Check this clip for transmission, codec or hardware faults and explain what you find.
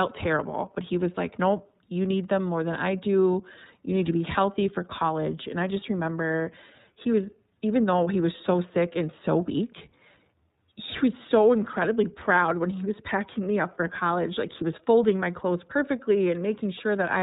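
The speech carries one codec fault throughout, the iLBC codec. Nothing above 4 kHz survives, and each 30 ms frame's excitation is coded independently, giving a plainly rough, synthetic edge that fits the 13.33 kbps mode. Unlike a simple low-pass filter, it adds buzzy roughness, and unlike packet loss, there are no gaps.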